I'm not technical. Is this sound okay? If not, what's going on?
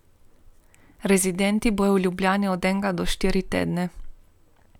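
Yes, nothing in the signal has gone wrong technically, so there's nothing here that needs fixing.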